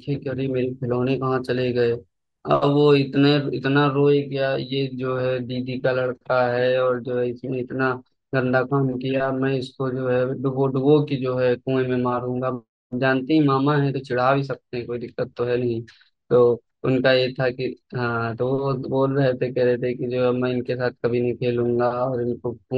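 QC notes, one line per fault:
3.64 s to 22.77 s, channel delay (comb filtering): the sound turns dull and slightly hollow, losing its airy top end. One channel lags the other by roughly 0.05 ms, which fits a two-sample offset. When the channels are summed to mono, the shared content cancels, cutting a notch near 10 kHz.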